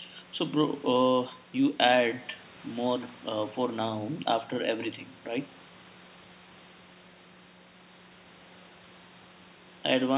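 No technical faults can be heard in this speech at any point.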